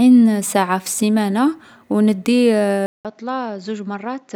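At 2.86 s, just after "في السيمانة و ندي", the recording likely switched its input to a poorer device with a narrower passband and its own character. A gap of about 0.19 s marks the switch. From there to the end, the speech has nothing above 7.6 kHz, so it sounds duller and boxier. It is roughly 10 dB quieter and sits over faint new background noise well below the speech.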